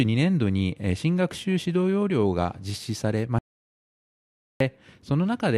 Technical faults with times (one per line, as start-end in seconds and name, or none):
3.39-4.60 audio dropout to silence